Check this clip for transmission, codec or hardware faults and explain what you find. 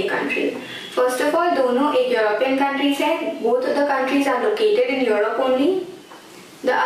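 No transmission, codec or hardware faults turn up anywhere in this clip.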